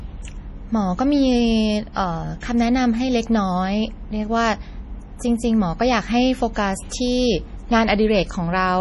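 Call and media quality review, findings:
Watery, swirly speech with smeared attacks throughout; spectrogram shows hard ceiling at 11.5 kHz and flickering holes. Likely MP3 compression, heavy damage fitting roughly 32 kbps.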